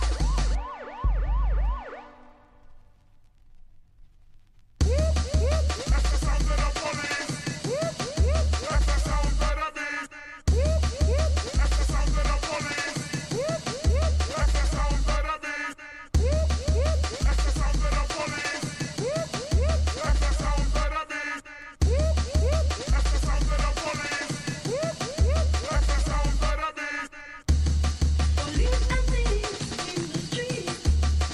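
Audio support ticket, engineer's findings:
No faults found in the audio on review; nothing to attribute to any component.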